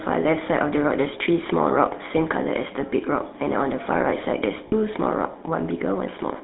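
From start to end, the speech carries the sound of the GSM full-rate codec. The band runs from about 200 Hz to 3.7 kHz, so the top and the deep low end are gone. The coder models the vocal tract and excites it with a sparse, regular pulse train, keeping only a third of the excitation samples. That thin excitation gives a plainly audible buzzy, gravelly grain. The character fits the 13 kbps full-rate coder.

At 4.68 s there is a short burst of lost GSM frames, lasting to about 4.73 s. Roughly 40 ms of audio is missing, which fits two 20 ms frames. The decoder does not go silent. It repeats the last good frame's settings. The gap is too short to be cut to silence. It is heard as a brief rough, metallic ring in place of the speech.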